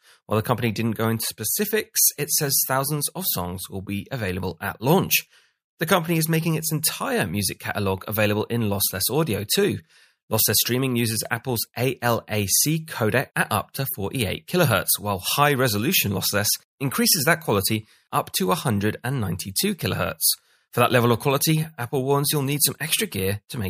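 Speech recording, no audible technical faults anywhere in it.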